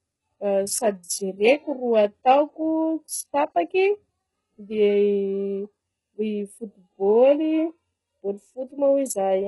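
HE-AAC compression is heard throughout the speech, from start to finish. Nothing reaches above 11.5 kHz, and the treble that remains sounds synthetic: s sounds come out gritty and lispy, with a metallic edge. The likely cause is an HE-AAC encoder working at a very low rate, around 12 kbps. It codes only the lower spectrum and fakes the highs by copying lower bands upward under a coarse envelope, so the rebuilt harmonics fail to line up with the real ones.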